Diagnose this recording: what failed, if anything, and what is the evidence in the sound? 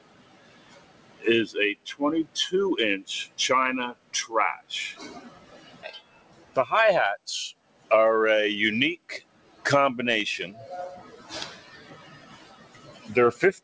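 Call processing is the culprit: a speech-tuned noise suppressor was left on for non-speech sound. Across the whole clip the level swings by around 20 dB, with attacks getting through while held sound and tails sink, so it pumps and thins. The top stops at 8 kHz, consistent with the G.722 call path.

The sound cut by the noise suppressor shows up at 0.0–1.24 s, 3.94–4.13 s, 5.24–6.56 s, 7.54–7.9 s, 8.98–9.65 s, 11.03–11.3 s and 11.56–13.08 s. Most dips are about 11 to 13 dB deep, and the one at 11.03 s is about 6 dB. The suppressor read those steady stretches as noise and clamped them.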